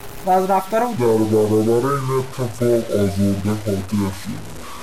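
A speech clip with a grainy, crunchy texture from start to finish, the mark of low bit depth without dither. The distortion tracks the level of the speech: quieter syllables and word endings break up into gritty fragments. The error sits at roughly 20 dB below the speech, which fits truncation to about 5 bits with no dither. That is likely a careless conversion to a coarse format. On a waveform, quiet passages show visible staircase steps. On a spectrogram, broadband grit rises and falls with the speech instead of forming a steady noise floor. From 0.97 s, right after "و از رفتار او", to the end, the section is at the wrong speed. It plays at about 0.6 times its original rate, so the speech drags and drops roughly ten semitones into a deep, sluggish register. This most likely comes from the section being played against the wrong clock. A spectrogram shows the harmonics and formants compressed downward and the syllables stretched in time, and the waveform's envelopes widen from that point on.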